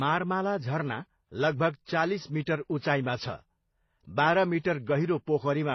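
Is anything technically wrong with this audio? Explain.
Yes. Throughout, the speech has nothing above about 6.2 kHz, with two kinds of codec smearing stacked together. That's likely transcoding between lossy codecs, which fits a 24 kbit/s MP3 re-encoded as 24 kbit/s HE-AAC, the second encoder wasting bits on the first one's damage.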